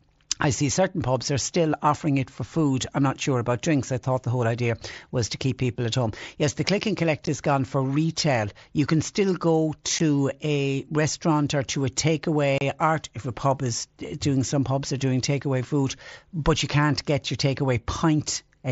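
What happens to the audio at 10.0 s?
A sudden 15 ms dropout with abrupt edges at 9.99 s: unconcealed Bluetooth headset packet loss, where missing voice packets between headset and phone were never filled in.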